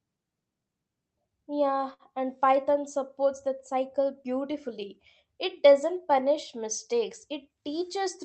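At 1.93 s there's a short stall from a late packet. The packet didn't show up on time, so the jitter buffer ran dry and the receiver stretched the last sound for about 60 ms until it arrived. Nothing gets lost, but you hear a held sound with a faint buzzy dip before the speech picks up right where it left off.

Then, just after "doesn't punish mistakes", from 7.50 to 7.81 s, you get a jitter buffer speed-up. The buffer was holding more audio than it wanted, so the receiver trimmed out pitch-period-sized slices over and over, around 50 ms in total. Speech runs at about 116% speed there with the pitch unchanged, so it comes across as rushed.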